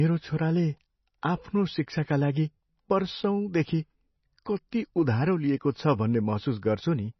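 MP3 compression throughout the speech: nothing sounds above 5.9 kHz, and the audio is watery and swirly with smeared attacks. This is likely the encoder running very short of bits, which fits a bitrate around 24 kbps, cutting the treble and switching weak frequency lines on and off between frames.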